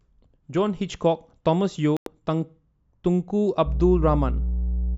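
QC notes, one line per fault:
1.97–2.07 s, digital broadcast dropout. The speech cuts to silence for about 96 ms, then returns mid-flow. The receiver muted after frames failed to decode, which fits roughly three lost frames. Whatever was spoken in that gap is simply gone.
3.64 s to the end, mains hum. A steady 60 Hz tone with low harmonics comes in and sits roughly as loud as the speech itself. Power-line current is leaking into the signal, most likely through a ground loop or a nearby transformer.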